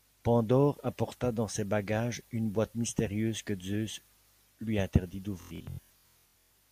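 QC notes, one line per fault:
5.42–6.51 s, Bluetooth stutter: lost packets make short slices replay as a machine-gun buzz, longest run 116 ms. Unlike a silent dropout, repeats fill the gaps, then the sound skips ahead.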